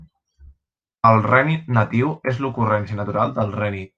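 No technical faults can be heard at any point in the recording, and the signal stays steady throughout.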